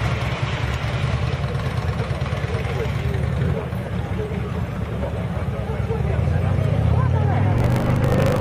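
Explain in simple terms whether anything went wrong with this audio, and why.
Near the end, from 7.52 s to 8.40 s, there is a block size mismatch (truncated). One stage hands over blocks, consistent with 1024 samples each, but the next keeps only part of each block. This causes a 50 Hz buzz and makes the sound run 1.16 times faster.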